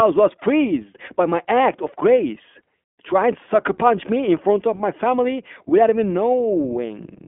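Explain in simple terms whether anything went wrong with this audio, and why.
The speech went through the iLBC codec for the whole clip. This is a phone-style voice codec. Nothing above about 3.7 kHz survives, so the sound is thin and boxy. Each short slice is coded on its own, which fits 20 ms frames. That leaves a plainly rough, synthetic edge.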